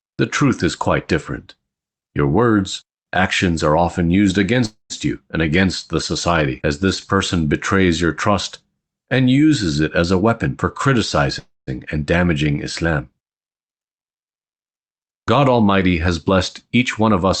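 At 4.65 to 4.92 s and again at 11.39 to 11.69 s there's a call audio freeze. The last sound trails off into a fading buzz or hiss, then about 140 and 190 ms of silence. Speech resumes right where it stopped with nothing lost, which points to packets likely stalling and the jitter buffer running dry.

From 10.21 to 10.99 s and 14.79 to 17.26 s you get a jitter buffer speed-up. Pitch stays put while the speech hurries along at 108% and then 105%, as the receiver trims roughly 70 ms and 150 ms of pitch periods.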